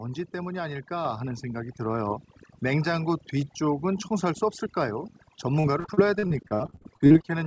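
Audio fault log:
Throughout: overdone noise removal. The noise reducer is set far too strong, pushing individual frequency bands down or off whenever they sit near its noise estimate. Quiet parts of the speech vanish with them, leaving near-silent background with twinkling specks.
1.05 s and 2.07 s: microphone volume stepped up. The call software judged the microphone too quiet and raised its input gain in single steps, about 5 dB, then about 1 dB. Voice and background jump together.
5.60–7.32 s: repeated packet loss (robotic sound). Packets went missing again and again, each gap patched by extending the last sound, with gaps up to 56 ms. About a third of the span is filled-in audio, giving choppy speech with pieces missing, on top of the G.722 call path's usual cutoff at 8 kHz.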